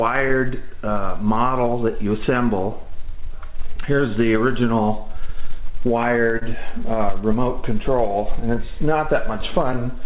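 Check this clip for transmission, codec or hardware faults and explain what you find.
Four faults are present, all tied to timing on a call link. The link itself shows no content above 4 kHz, which fits a G.711 A-law codec at 64 kbps.

Clock drift between sender and receiver runs through the whole clip. The sender's clock runs about 2% slow against the receiver's. The jitter buffer therefore keeps draining. The receiver has to make up the shortfall by adding sound. It can never settle into a steady state. The result is a faint unevenness that never fully goes away. Small hiccups recur at irregular intervals from start to finish.

Repeated timing corrections span 0.19 s to 9.80 s. The playback runs at about 98% speed overall. Roughly 150 ms of extra material gets stretched in across that span. Each correction goes the same way, lengthening rather than cutting. They are small and unevenly spaced. 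At most, the ear hears a slightly dragging, unsteady tempo rather than any single obvious glitch.

Scattered short gaps fall between 2.90 s and 3.79 s. About three packets arrive late or go missing there. Each hole is tiny, a few milliseconds at most. Together they cover only around 10 ms. The receiver fills each one by continuing the previous sound. Nothing is lost outright. What remains is a brief tick or slight smear at each patch.

A short stall from a late packet occurs at 6.39 s to 6.44 s. One packet missed its slot, and the jitter buffer ran dry. The receiver held the last sound for 26 ms until the packet came in. Playback then resumed from the same point. Nothing is missing. Instead, one sound lingers a moment too long, with a faint buzz or dip. Overall delay grows by 26 ms.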